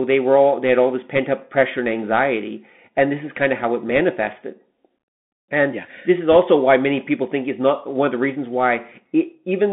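The Bluetooth CVSD headset codec runs throughout this speech clip, and its damage is plainly audible. The sound is confined to a telephone-like band of roughly 150 Hz to 3.5 kHz, which fits 64 kbps CVSD, where each sample is coded as a single up-or-down step whose size keeps adapting. A granular hiss sits under the speech, s sounds come out scratchy, and loud, bright moments distort where the step size can't keep up with the waveform. Bit errors on a Bluetooth voice link appear three times. The first is at 1.16 to 1.19 s, between "they had all this" and "up pressure and anxiety". The second is at 3.96 to 4.00 s, just after "kind of how it". The third is at 6.33 to 6.36 s, between "yeah this is" and "why many people think". Each burst adds a brief rushing crackle rather than a hard click, because no single bit outweighs the others in CVSD and the error fades quickly. The crackle is roughest at 6.33 s, where the error rate is highest at around 1.5 percent. 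It is mildest at 3.96 s, at around half a percent.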